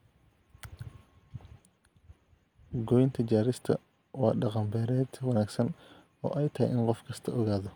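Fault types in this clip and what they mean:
No faults can be heard anywhere in this speech clip.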